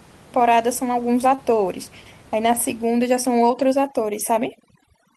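Short concealed packet loss occurs between 1.35 and 1.39 s. About 20 ms of the speech never reached the decoder in time, and the receiver patched the gap by extending the preceding sound for roughly 21 ms, carrying its pitch forward where it was voiced or substituting shaped noise where it was not, before crossfading back into the real signal. The result is a quick smear or wobble, and a brief consonant in that spot can drop out entirely.

Overdone noise removal takes hold from 2.85 s and continues to the end. The room noise sits about 26 dB below the speech, and a noise suppressor applied far too aggressively to it pushes individual frequency bands down or out whenever they approach its noise estimate, taking the softer parts of the voice with them. The background drops away and breaks up into twinkling, warbling specks.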